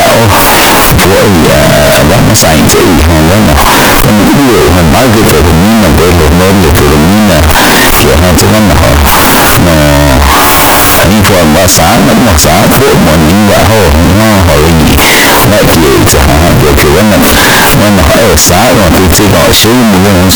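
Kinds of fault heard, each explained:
Float read as integer: The speech is extremely loud and harsh from start to finish, with background noise pushed up to the same level as the talking. The likely cause is 32-bit floating-point samples being read as 32-bit integers, so each sample's sign and exponent bits, not its true size, set the level. On a waveform the trace is almost square, sitting at an almost fixed, high level. A spectrogram shows dense broadband energy throughout, including the pauses.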